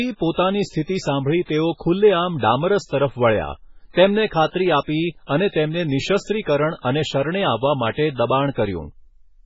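Throughout the clip, the speech was most likely squeezed through MP3 compression at a very low bitrate, one that fits roughly 16 kbps. With so few bits, the encoder threw away weak frequency lines and let others flicker in and out from frame to frame, and it cut the treble off completely: nothing remains above 7.6 kHz. The result is heavy codec damage, a dull, swirling, watery sound with smeared consonant attacks and metallic chirps on s sounds.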